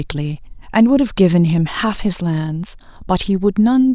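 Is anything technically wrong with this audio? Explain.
No, nothing technically wrong can be heard in this speech recording. There is no moment in it where a fault stands out.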